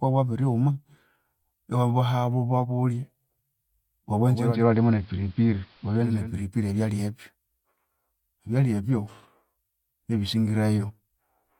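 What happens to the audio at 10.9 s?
Nothing goes wrong at 10.9 s; the speech carries on intact through that moment with no dropout, click or distortion.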